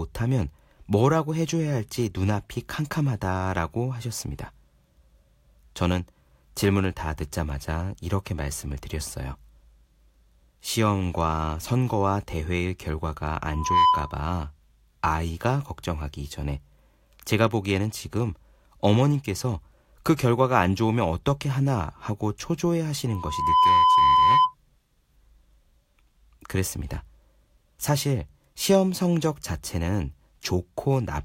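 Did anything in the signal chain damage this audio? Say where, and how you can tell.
Yes. A pure tone at 1 kHz swells up over a fraction of a second and rings roughly 10 dB above the speech, from 13.51 to 14.22 s and again from 23.08 to 24.55 s, the second one building more slowly, over about half a second. This is loudspeaker feedback squeal in the analogue acoustic path: the microphone hears the loudspeaker it drives, loop gain tops unity at 1 kHz, and that frequency keeps growing until the loop is interrupted.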